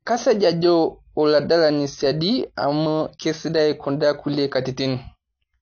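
From start to finish the speech carries AAC compression damage: nothing above 6.5 kHz, dull and smeared, with a fizzy warble on sibilants, likely a low-bitrate AAC-LC encode.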